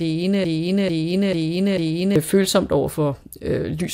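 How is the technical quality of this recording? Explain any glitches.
The recording has one clear glitch, a broken-record loop. From 0.44 s to 2.16 s the speech stops moving forward, and the same 0.44 s fragment plays four times back to back. Each repeat is identical, so the passage stutters mechanically instead of continuing. The likely cause is a stall in the player, encoder or stream that kept resending the last piece it held. Whatever should have been heard during those seconds is lost.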